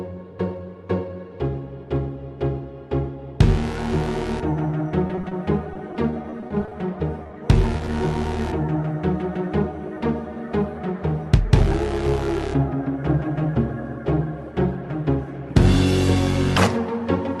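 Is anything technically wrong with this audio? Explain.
Yes, there is packet loss in two forms.

From 5.07 to 5.33 s and again from 5.73 to 6.73 s there is repeated packet loss (robotic sound). Holes of up to 20 ms follow one after another, and each is patched by extending the preceding sound. The result is choppy, with pieces missing. Because the patches repeat, the damage recurs across the stretch rather than glitching once.

Short concealed packet loss occurs at 7.23 to 7.31 s and at 7.77 to 7.81 s. The first is two back-to-back losses of 20 ms each and the second a single 20 ms loss, each filled from the preceding sound and then blended back. It is heard only as a brief smear or wobble, not as sustained choppiness. The call codec's band limit is around 12 kHz.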